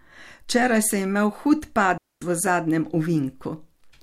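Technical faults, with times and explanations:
1.98–2.22 s, digital wireless dropout: the receiver lost too much data and muted for about 240 ms, leaving a clean near-silent hole with no noise burst around it.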